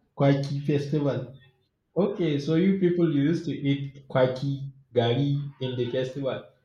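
No technical faults can be heard anywhere in the speech recording; the signal stays steady and intact throughout.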